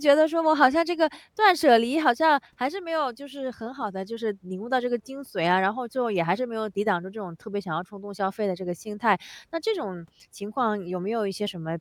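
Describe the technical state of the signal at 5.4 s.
At 5.4 s the speech signal is intact, with no dropout, clipping, distortion or other fault to be heard.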